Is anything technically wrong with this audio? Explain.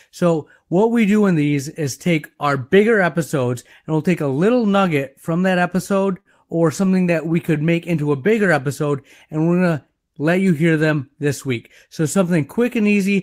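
Yes, there are three related packet-timing faults in this speech clip.

From 6.20 to 6.28 s there is a short stall from a late packet. A packet arrived late and the jitter buffer emptied, so the receiver held the last sound for about 50 ms and then resumed where it left off. Nothing is lost, but the sound is briefly drawn out with a faint buzz or dip, and playback ends up about 50 ms further behind.

From 6.85 to 7.63 s there are scattered short gaps. Roughly seven isolated packets were lost or late, each hole about 10 ms or shorter. The receiver bridged each one by extending the preceding sound, concealing around 7% of that stretch. No content drops out, but the speech picks up small ticks and smears.

From 7.52 to 8.01 s there is a jitter buffer slow-down. With its reserve depleted, the buffer rebuilt delay by repeating individual pitch periods many times over, adding about 37 ms. Playback runs at about 94% speed with unchanged pitch, so syllables sound stretched.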